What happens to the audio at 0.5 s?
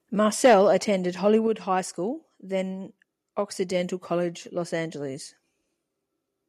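Around 0.5 s the loudest part of the sound distorts with microphone overload, from 0.44 to 0.61 s. The peaks push about 5 dB past what the converter can represent, so their tops are sliced flat. A small share of samples in that stretch is clipped. The result is a harsh, crackly edge on the strongest syllables. The likely cause is the microphone input volume being set too high.

At 0.46 s the microphone volume is stepped down. Voice and background drop together by about 2 dB in one sudden move, right inside the distorted stretch. That timing points to the call software reacting to the clipping peak. It has likely lowered the device's input volume in a single step rather than fading it. The level shift is abrupt, not gradual.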